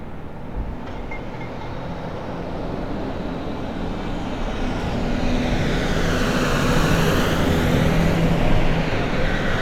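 No technical faults can be heard anywhere in this everyday sound recording, which stays continuous and stable throughout.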